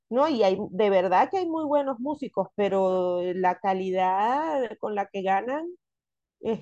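No technical faults can be heard anywhere in the recording.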